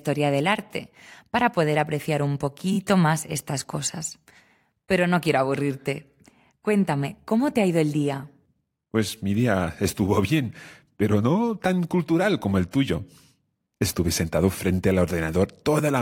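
Repeated frames at 2.72 to 2.77 s, right after "para poder apreciar un" and before "más estas cosas", interrupt this speech recording with a brief stutter. The same sliver of audio plays twice more in quick succession, adding about 46 ms. That fits one compressed frame of roughly 23 ms being written or sent again, so the decoder reproduces it back to back. The repeat boundaries, where the frame edges don't line up, can produce small blips.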